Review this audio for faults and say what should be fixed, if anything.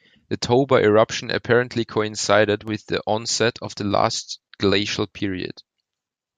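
Regular clicks recur every 1.24 s from 0.20 s to 5.15 s, roughly five in all, each a small jump of a few tens of samples. These are likely clock drift buffer slips: two devices drifting apart by around 500 ppm, forcing a buffer to drop or repeat blocks. Lock both devices to one word clock or add asynchronous sample-rate conversion.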